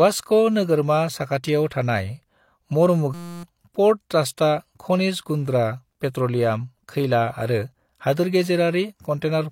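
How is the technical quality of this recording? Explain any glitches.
One glitch mars the speech. At 3.14 to 3.43 s there is a system hang loop: the system froze while the hardware kept replaying one 5.8 ms buffer, producing a steady 172 Hz buzz.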